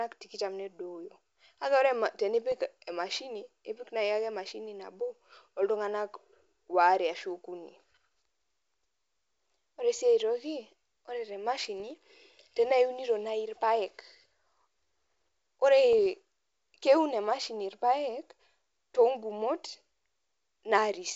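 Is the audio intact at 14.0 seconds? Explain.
Yes, the audio is intact at 14.0 seconds: the speech there carries no fault, with only the faint upper-band hiss of G.722 wideband telephone coding at 64 kbit/s.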